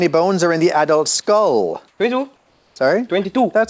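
At 1.88 s, for 120 ms, and again from 2.36 to 2.76 s, the quiet background gives way to comfort noise: a steady, featureless hiss of about the same level (about 1 dB up, then about 3 dB down) that lacks the texture of the real background. This likely comes from discontinuous transmission, with the receiver synthesising noise during pauses. Unlike a noise gate or dropout, the gap is filled rather than silent. The band stops at 8 kHz, consistent with a wideband call codec.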